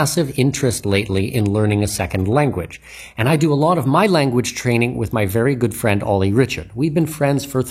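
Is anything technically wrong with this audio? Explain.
Yes. From 0 to 4.0 s this is an adaptive stream starting at a low bitrate, likely around 20 kbit/s HE-AAC, chosen before the player had measured the connection. The speech sounds dull, with synthetic treble and stronger codec artefacts, until it jumps cleanly at 4.0 s, without any gap, to fuller sound fitting 96 kbit/s AAC-LC.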